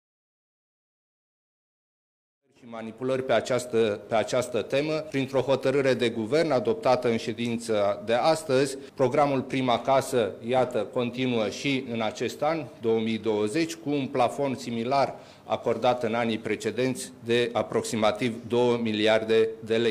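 No technical faults can be heard anywhere in this audio.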